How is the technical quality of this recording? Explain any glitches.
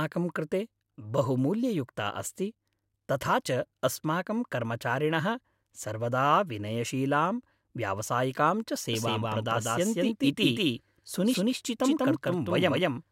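The recording is marred by one glitch in its final seconds. A doubled audio track begins at 8.93 s and runs to the end: the speech is suddenly joined by a second, identical copy trailing about 200 ms behind, at roughly the same loudness. This is likely a second capture of the same signal through a slower path, mixed in alongside the first. The copy carries no reverb or room colour, so each syllable sounds like a crisp, full-band echo that switches on abruptly.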